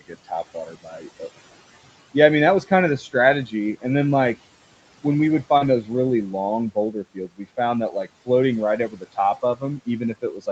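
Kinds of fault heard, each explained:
Speech cut by the noise suppressor: the suppressor mistook parts of the speech for background, pulling them down by up to about 19 dB, so syllables sound swallowed and faint.
Short concealed packet loss: about 40 ms after "like when we would" arrived too late, and the receiver extended the preceding sound to cover it, leaving a brief smear.
Lost packet rebuilt from error correction: right after "like when we would", about 40 ms was decoded from Opus low-bitrate backup copies, likely two lost packets, sounding momentarily rougher and noisier.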